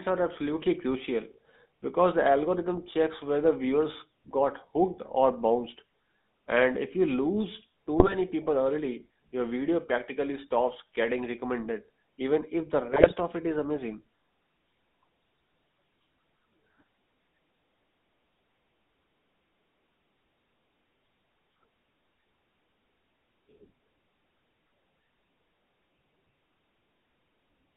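Speech that sounds buzzy and gravelly throughout, with a narrow telephone band running from about 150 Hz to 3.7 kHz. This is the GSM full-rate codec: the voice is rebuilt from a vocal-tract model driven by a coarse, regularly spaced pulse excitation, which fits a 13 kbps GSM full-rate coder. Two short bursts of squawking and gargling break in, from 7.99 to 8.15 s, between "if you lose too" and "people early your video", and from 12.90 to 13.13 s, between "recommended even if the" and "of it is amazing". These are GSM bit errors, where corrupted filter, pitch and gain values reach the decoder and distort several consecutive frames.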